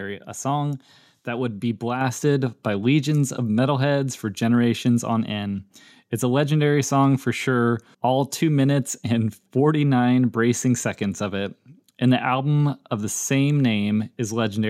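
At 2.01 s, between "song that would be" and "by legions of metalheads", the microphone volume is stepped up. The call software judged the input too quiet and raised the device's capture gain in a single step of about 4 dB. Because the change happens before any processing, the speech and the background noise jump in level together, with no fade. The result is a sudden, mid-sentence lift in loudness.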